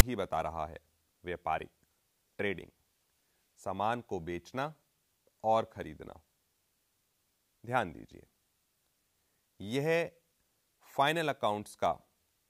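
At 0.00 s, file tags played as audio: a block of text tags is decoded as samples, giving a brief, hard-edged rasp offset to one side.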